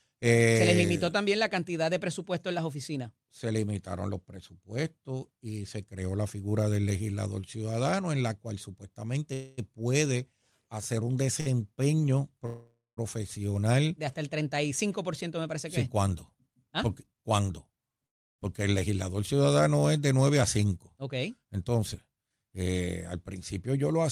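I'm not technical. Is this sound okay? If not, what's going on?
No, there are a few glitches in this speech.

At 9.33 s, 12.46 s and 18.06 s the sound stops for a quarter to half a second, filled with a fading buzz or near silence, then carries on with nothing lost. This call audio freeze is likely caused by network data arriving late, leaving the receiver briefly with nothing to play.

At 11.40 s a sound is held slightly too long, for about 58 ms. This short stall from a late packet happens when one small piece of audio arrives late and the receiver stretches what it already has until it does.

From 15.86 to 17.40 s and 20.42 to 22.31 s the talking sounds hurried, running about 9% fast at normal pitch. This jitter buffer speed-up happens when delayed audio piles up, so the receiver trims tiny slices to catch up.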